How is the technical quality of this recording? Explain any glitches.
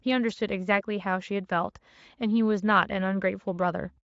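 The speech has no glitches to point to, and its signal is in sound technical condition throughout.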